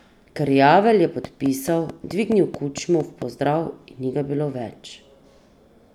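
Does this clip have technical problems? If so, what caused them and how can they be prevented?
Yes. A train of clicks runs from 1.25 to 3.23 s: about ten near-identical pulses at a regular 4.6 per second, peaking about 5 dB above the speech and ticking through the gaps as well. The steady spacing and uniform shape point to a periodic disturbance outside the sound itself, most likely electrical interference from nearby equipment or a faulty connection or power supply. Keep phones and switching gear away from the recording chain and use a stable, well-grounded interface.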